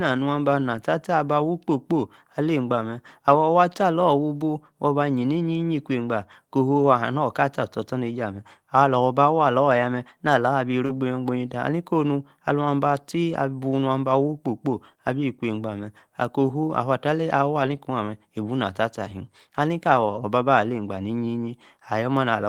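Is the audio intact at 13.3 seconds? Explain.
No, not entirely. From 13.29 to 13.35 s there is a lost packet rebuilt from error correction: about 40 ms, consistent with two 20 ms packets, was replaced by low-bitrate copies carried in the following packets. There is no gap, but the patch sounds rougher and noisier. A spectrogram shows a brief smeared, grainier band, and the waveform stays continuous.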